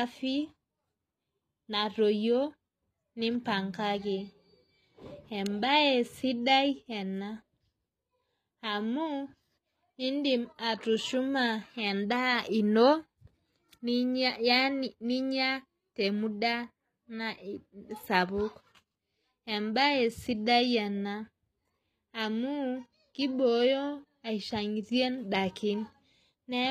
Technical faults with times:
0.00-26.70 HE-AAC compression

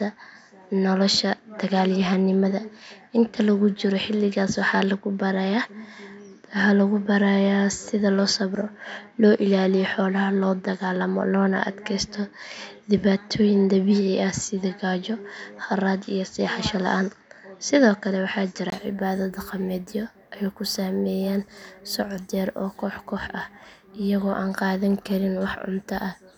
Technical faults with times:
0.00-18.72 input switched to a poorer device

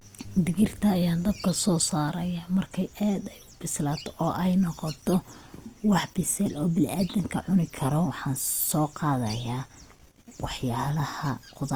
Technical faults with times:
0.00-11.75 Opus compression

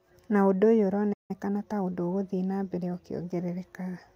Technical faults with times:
1.13-1.31 playback stall
1.31-1.95 time-compressed catch-up

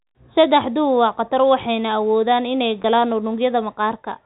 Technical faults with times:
2.82-2.84 packet loss with pitch repetition

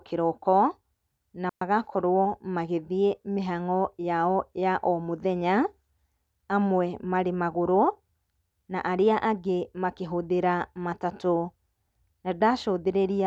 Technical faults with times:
1.49-1.61 digital wireless dropout

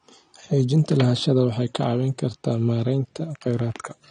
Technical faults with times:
0.00-4.10 AAC compression

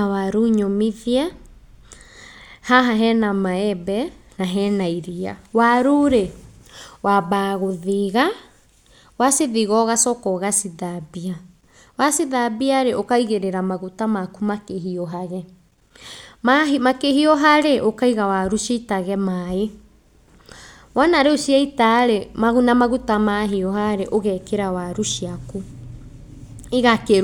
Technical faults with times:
none

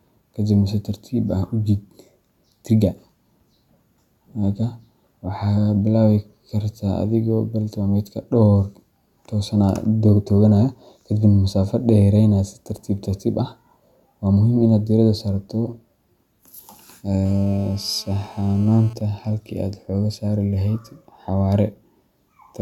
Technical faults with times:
17.25-18.93 GSM phone buzz
19.01-21.26 GSM signalling bursts

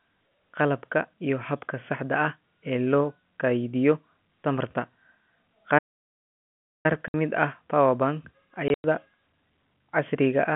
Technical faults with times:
5.78-6.86 playback stall
7.08-7.14 packet loss filled with silence
8.68-8.84 packet loss filled with silence

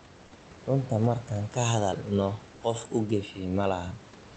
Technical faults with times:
0.11-4.34 clock slip clicks

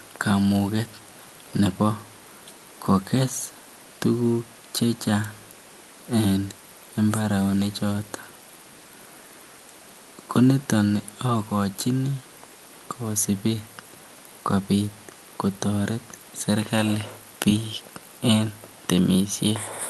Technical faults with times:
none

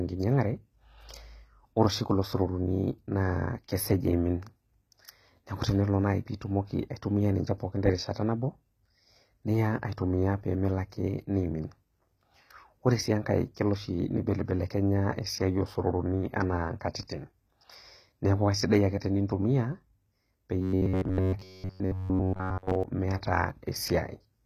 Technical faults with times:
0.00-24.45 HE-AAC compression
20.62-22.83 robotic sound from repeated short buffers

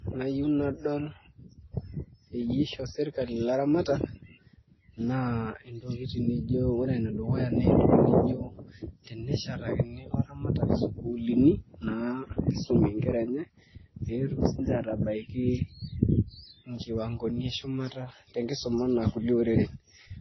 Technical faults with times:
0.00-20.21 transcoding between lossy codecs

